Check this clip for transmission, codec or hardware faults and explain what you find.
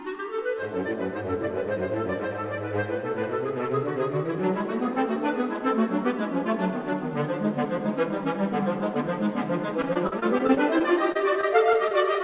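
There's one real problem, near the end: repeated packet loss (robotic sound) from 9.82 to 11.92 s. About a dozen short dropouts, the longest around 43 ms, each get papered over by stretching the previous sound. That makes a choppy stutter with bits missing. The sharp cutoff at 4 kHz fits a narrowband call codec like G.711, and that's just how the call path sounds, not a fault.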